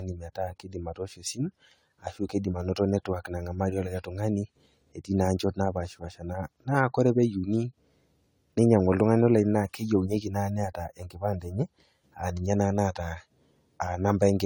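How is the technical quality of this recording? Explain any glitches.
Generation loss runs throughout: the speech was likely re-encoded about seven times in a lossy codec, consistent with AAC near 64 kbit/s. Stacked quantisation noise leaves it swirly and hollow, with blurred attacks.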